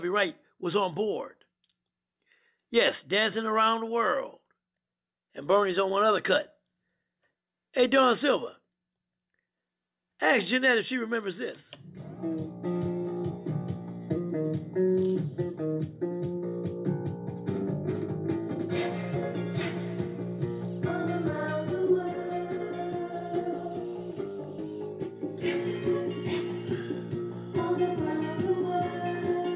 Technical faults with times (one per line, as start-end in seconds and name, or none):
none